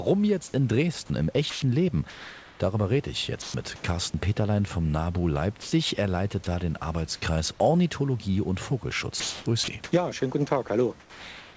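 At 1.50 to 1.62 s, 3.42 to 3.54 s and 5.62 to 5.72 s there is sound dropped by the voice detector, likely because the sender's detector mistook quiet speech for background and stopped transmitting. About 60, 60 and 90 ms of speech vanish under a brief steady hiss.

Comfort noise replaces the background from 1.50 to 2.60 s and from 3.42 to 3.84 s, likely from the sender pausing transmission while the receiver synthesises noise. The room noise, sitting about 30 dB below the speech, turns flat and featureless for roughly 620 ms and 200 ms.

From 9.20 s to the end, the sound is chopped by the voice detector, likely toggling between sending and muting. Nearly a second in total becomes synthetic fill, so syllable edges drop out. Throughout, the G.722 call path leaves nothing above 8 kHz.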